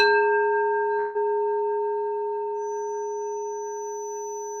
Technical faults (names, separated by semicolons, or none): long network dropout; feedback whistle